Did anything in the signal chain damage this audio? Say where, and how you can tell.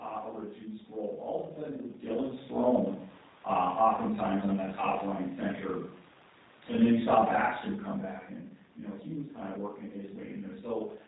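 Yes, at the codec stage, and it lasts the whole clip. The speech sounds plainly rough and synthetic from start to finish, and nothing is heard above 4 kHz. Both point to G.729 encoding at around 8 kbit/s. This codec does not keep the waveform. It rebuilds each 10 ms frame from a vocal tract filter, a pitch predictor and a handful of pulses, which leaves that buzzy, artificial texture. The level changes around 1.5 s and 7.5 s come from the talker moving, not from the chain.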